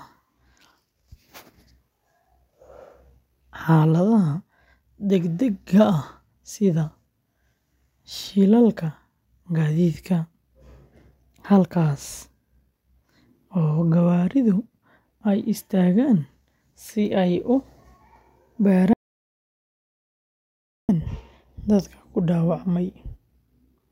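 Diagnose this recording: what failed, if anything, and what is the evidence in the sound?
Audio dropout to silence at 18.93 s, running to 20.89 s, so about 1.95 s of speech is gone. The speech breaks off abruptly mid-flow and resumes just as abruptly, and the gap holds silence with no room tone or hiss at all. A natural pause or a noise gate would leave some floor or a tail. The likely cause is the input stage dropping out, through a disconnected device, a failed link or a mute, while the recorder kept writing silence.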